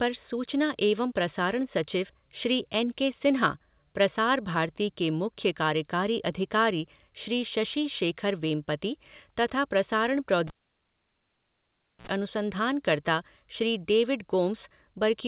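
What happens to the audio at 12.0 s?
Cable pulled and plugged in, from 10.47 s to 12.07 s, with 12.0 s falling at the reconnection. A live cable was yanked out, leaving about 1.55 s of near silence after an opening pop. As the plug goes back in, the tip touches first, letting through a roughly 57 ms burst of 60 Hz mains buzz, then a second pop as the signal returns at 12.07 s into the 4 kHz-limited call audio.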